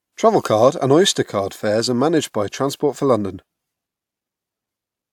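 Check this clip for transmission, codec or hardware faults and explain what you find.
Nothing in this speech recording points to a fault anywhere in the signal chain. There is no event to locate, so there are no times or values to report.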